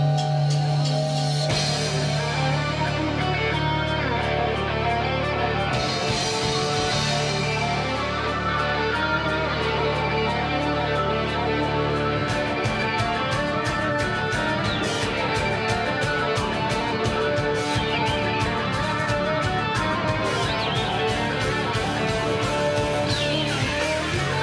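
No technical faults can be heard anywhere in the audio. There is nothing to mark at any point in the recording.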